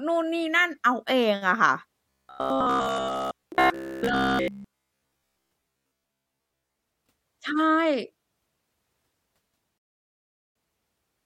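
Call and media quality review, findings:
Robotic sound from repeated short buffers, 2.10–6.76 s: rigid metallic buzz near 66.7 Hz, likely from a starved playout repeating a 15 ms slice. Unlike packet-loss concealment, it stays continuous.

Rebuffering stall, 9.78–10.55 s: player buffer ran dry. Clean silence of about 0.78 s, then resumes exactly where it stopped. Nothing skipped, unlike a dropout.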